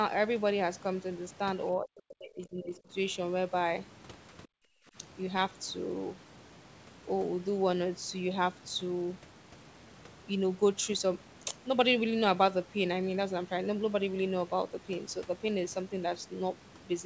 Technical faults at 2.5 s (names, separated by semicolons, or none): speech suppressed in double talk